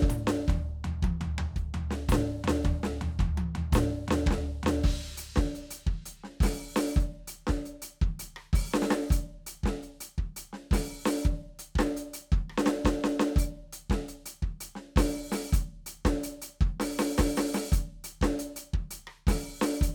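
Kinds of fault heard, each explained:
No technical faults heard.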